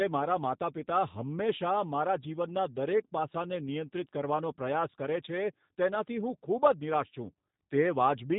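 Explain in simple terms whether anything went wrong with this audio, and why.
Throughout the speech, G.729 codec damage is plainly audible: nothing above about 3.8 kHz survives, and each syllable sounds rough and slightly synthetic because it is rebuilt from a simple model of the voice. A plain muffling filter would dull the sound without adding that artificial grain.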